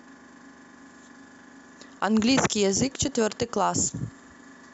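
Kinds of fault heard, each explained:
DAB burbling: A brief patch of short noise blips in single sub-bands sits over the speech from about 3.08 to 3.16 s, with roughly seven MP2 frames hit. Weak reception let a trickle of bit errors past error correction, corrupting samples so single sub-bands carry short blips of noise.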